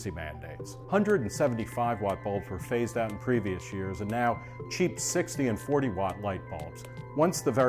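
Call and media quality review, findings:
Nothing to flag here, with no audible faults anywhere in the recording.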